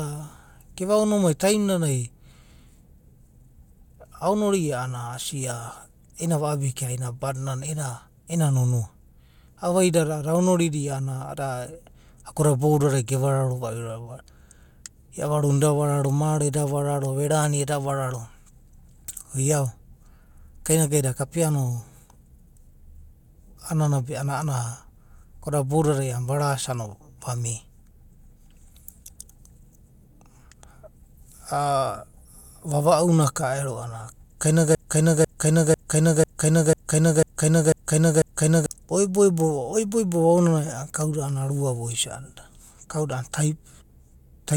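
Broken-record loop, 34.75 to 38.66 s: one 0.5 s speech fragment repeats eight times, likely a stalled stream resending its last piece.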